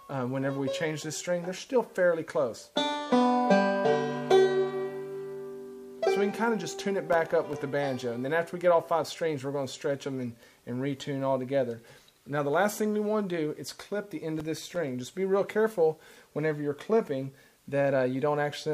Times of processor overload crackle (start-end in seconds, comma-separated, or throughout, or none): 7.13-7.62, 14.39-14.75